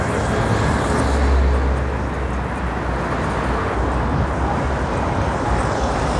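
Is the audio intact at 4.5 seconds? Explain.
Yes, the audio is intact at 4.5 seconds, with no audible fault at that moment.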